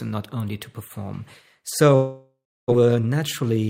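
From 1.95 to 2.74 s a long network dropout, likely lost packets, leaves a fading buzzy fill and then silence, shown as a smeared, thinning spectrogram band before a flat waveform. From 2.82 to 3.64 s a jitter buffer speed-up trims pitch periods, running speech about 110% fast at unchanged pitch. The waveform looks compressed, with about a tenth of a second removed.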